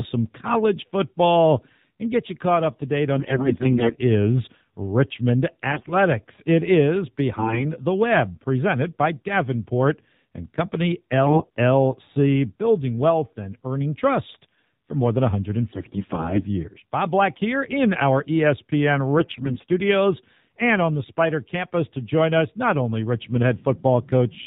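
The whole clip runs through the AMR narrowband mobile codec, so nothing above 4 kHz survives and the speech has that thin, buzzy, slightly synthetic edge you get when the vocal-tract model is working on a tight bit budget. The damage is plainly audible, and it sounds like one of the lower modes, which fits something around 7.4 kbps.

On top of that there are AMR bit errors in six bursts: 3.16 to 3.95 s right after "caught up to date", 5.72 to 5.93 s, 7.36 to 7.64 s, 11.26 to 11.50 s, 15.72 to 16.45 s right after "trust for more than", and 19.18 to 19.64 s. Each time the frames got through the checksum, but a fair share of their weaker bits, something like one in ten, or about 15% in the 11.26 s burst, came in flipped. The excitation pulses land in the wrong spots and the fine pitch, gain and spectral values drift, so the speech holds its pitch and level but goes hoarse, scratchy and gargly for those stretches.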